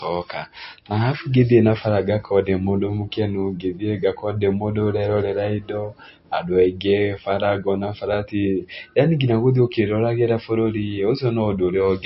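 Throughout the speech, the audio was likely encoded as a low-bitrate MP3, around 32 kbit/s, and then re-saved at a high bitrate near 256 kbit/s, a case of low-bitrate audio saved at a high bitrate. Nothing sounds above 5.6 kHz, leaving the speech dull and muffled, and the larger file cannot restore what the first encoding removed.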